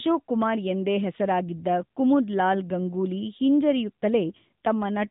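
The speech sounds boxed-in and buzzy, with nothing above about 3.8 kHz and a plainly audible synthetic edge throughout. That points to the AMR narrowband mobile codec, which rebuilds the sound from a vocal-tract model at 8 kHz sampling, and the damage fits a mode near 10.2 kbps.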